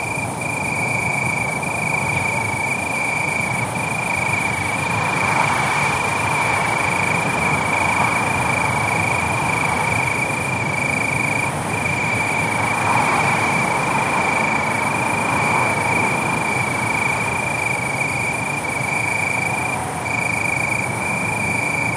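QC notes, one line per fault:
Nothing stood out on listening.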